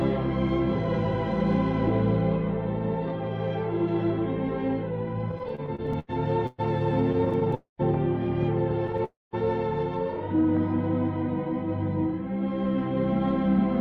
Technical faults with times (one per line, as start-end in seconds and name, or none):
5.31-7.54 repeated stalls (stutter)
7.54-7.81 call audio freeze
9.04-9.35 call audio freeze